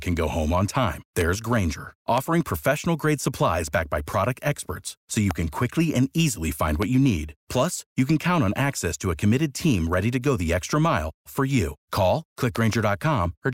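Loud pops land at 1.21 s, just after "go home on time"; at 2.18 s; at 5.31 s, between "product experts so you" and "can quickly and easily"; at 6.82 s, before "you need"; and as a double pop around 12.56 to 12.75 s. Each sharp thump stands well above the speech, likely a voltage pulse from a plug, switch or static discharge. Unlike a dropout, the speech carries on unbroken beneath each pop.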